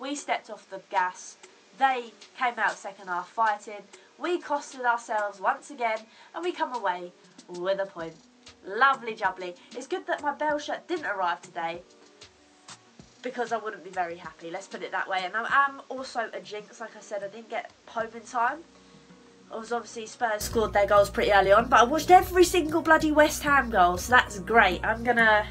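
From 0.0 to 20.41 s the sound is dull and narrow, with nothing above 8.4 kHz. It is roughly 10 dB quieter, with a new noise floor about 30 dB down. This likely comes from the input switched to a poorer device. At 20.41 s it clears without a gap.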